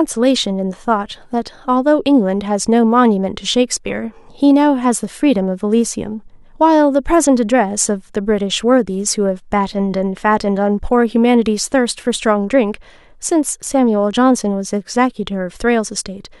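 No faults are audible anywhere in the speech recording.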